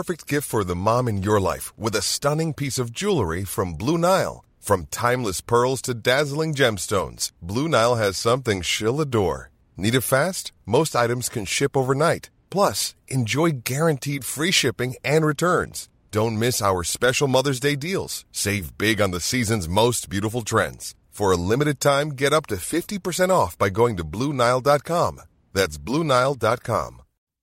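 No technical faults can be heard in the recording.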